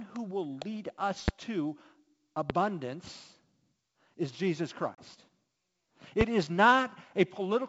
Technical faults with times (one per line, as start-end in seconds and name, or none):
1.28-1.31 loud pop
2.50-2.53 loud pop
4.95-5.04 packet loss on an ADPCM call
6.21-6.24 loud pop